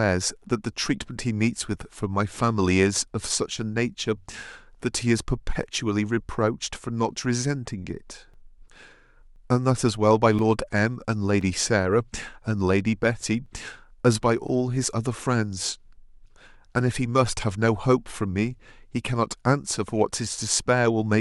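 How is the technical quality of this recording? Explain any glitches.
The recording has one clear fault: periodic USB or driver dropouts. They run from 8.34 s to 14.49 s and repeat every 1.02 s, about seven in all. Each time, something blocks the USB bus or audio driver on a fixed schedule. A few milliseconds of speech are lost and replaced by silence. The gaps are brief and evenly spaced. So they come across as regular, clock-like ticks over the speech.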